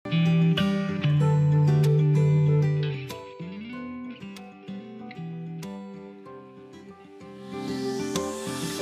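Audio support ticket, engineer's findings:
Listened through and found nothing to flag here, so no issue to report on this ticket.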